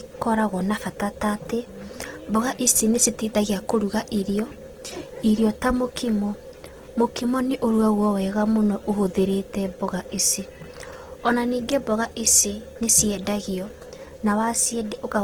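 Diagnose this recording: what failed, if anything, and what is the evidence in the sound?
The likely cause is at the codec stage: Opus compression in CELT mode, starved of bits at a rate that fits 16 kbps. Throughout the speech, band energies survive but their fine detail is refilled, so the sound turns rough, grainy and noisy, though content still reaches 20.2 kHz.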